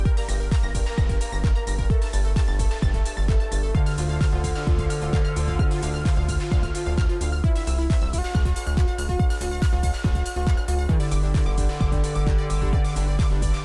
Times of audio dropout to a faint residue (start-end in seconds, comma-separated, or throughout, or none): none